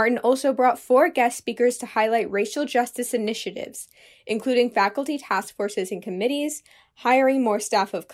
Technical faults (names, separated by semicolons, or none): none